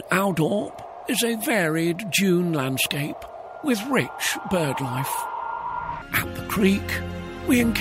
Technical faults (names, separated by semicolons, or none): none